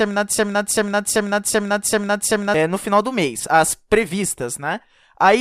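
A stalled player or stream likely kept resending its last buffered fragment, causing a broken-record loop that is already running at the start and lasts until 2.54 s. One 0.39 s piece of speech repeats identically six times, replacing the intended audio before "no final do mês".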